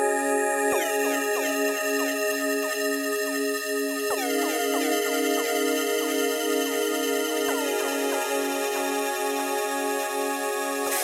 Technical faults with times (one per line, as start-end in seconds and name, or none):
none